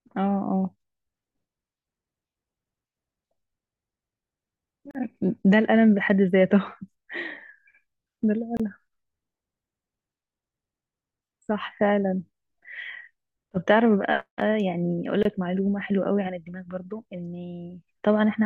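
At 4.91, 8.57 and 15.23 s you get short silences of about 38, 27 and 24 ms: gaps at joins of encoded pieces, where untrimmed encoder delay and end padding left little holes.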